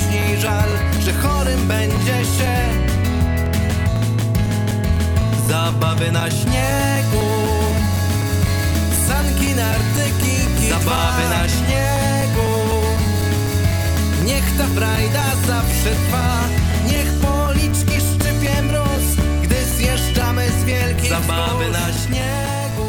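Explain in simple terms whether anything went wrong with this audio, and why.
Periodic USB or driver dropouts: something kept interrupting the audio connection every quarter second, each time replacing a few milliseconds of sound with silence. From 0.22 s to 22.72 s this gives around a hundred evenly spaced ticks, heard wherever sound is present.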